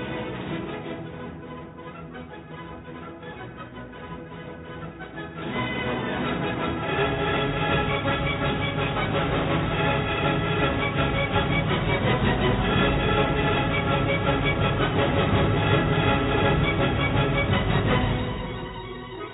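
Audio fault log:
No faults heard.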